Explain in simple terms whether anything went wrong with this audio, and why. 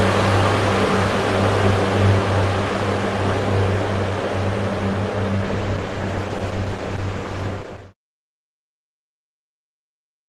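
A call bitrate drop happens from 5.46 to 8.24 s. The connection briefly had less room, so the encoder squeezed the sound harder and it lost detail and clarity. Unlike dropouts or glitches, there are no gaps: quality sags for nearly three seconds, then recovers.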